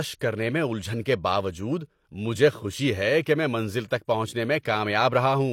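At 4.61 s, pre-echo: a short hiss smears about 41 ms ahead of the attack, as transform-codec noise fills the quiet lead-in, showing as broadband haze before the onset on a spectrogram.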